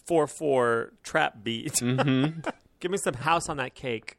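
From 0.12 s to 4.18 s the speech carries clock slip clicks. Tiny ticks arrive roughly every 30 ms, well over a hundred of them, and they blur into a soft, steady rattle. They are clearest on loud, sustained sounds and fade where the signal drops away. The likely cause is two devices running on unsynchronised clocks, off by several hundred parts per million. Each slip fits one sample being dropped or repeated.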